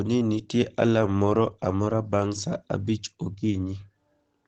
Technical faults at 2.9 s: Opus compression

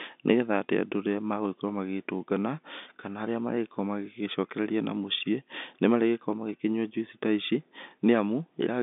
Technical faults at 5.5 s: none

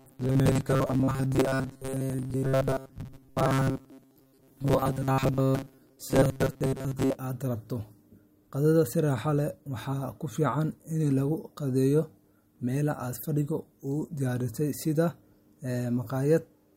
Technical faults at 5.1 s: robotic sound from repeated short buffers

